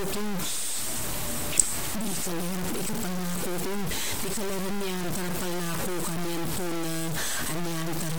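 From start to finish the speech carries a coarse, grainy distortion that tracks every syllable, with the error nearly as loud as the voice. That's low bit depth without dither, likely a 5-bit truncation, so quiet tails sputter or vanish between steps.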